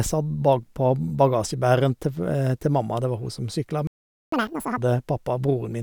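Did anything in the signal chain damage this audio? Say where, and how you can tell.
Yes, at the playback stage. A playback stall cuts the speech off mid-flow at 3.87 s, and the output stays silent until 4.32 s, a gap of about 0.45 s. The silence starts abruptly rather than at a natural pause. The likely cause is the player's buffer running dry or its output thread being blocked, so no samples reached the output device.

Right after the gap, from 4.32 to 4.78 s, the speech runs at twice normal speed with pitch raised by roughly ten semitones, then snaps back to normal. This is catch-up at higher speed: the player resamples its backlog to recover the time it lost during the stall. The fast section lasts about as long as the silence, which fits a 2x rate clearing that deficit before normal playback resumes.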